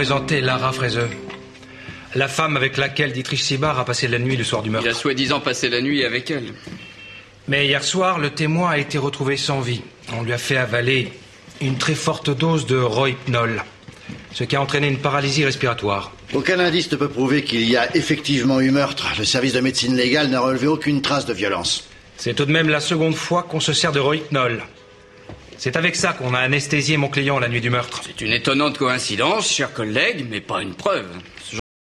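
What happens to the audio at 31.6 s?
At 31.60 s the audio hits a cut-off end. The sound stops mid-event and drops straight to digital silence through 31.94 s, because the final buffers were never written. Unlike a fade-out or natural ending, there is no decay or tail, only an abrupt stop.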